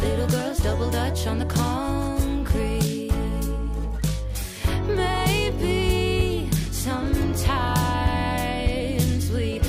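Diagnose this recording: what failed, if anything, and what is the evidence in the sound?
Nothing failed; no stage shows any audible problem.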